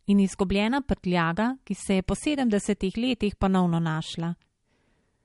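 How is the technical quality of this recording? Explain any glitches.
Quality is poor, with plainly audible codec damage through the whole speech clip. From start to end the sound is watery and swirly, and nothing survives above 11.2 kHz. The likely cause is MP3 compression at a bitrate low enough to suggest about 48 kbps. Starved of bits, the encoder cuts the treble and lets weak frequency lines flicker on and off, which a spectrogram shows as a flat ceiling and patchy speckles.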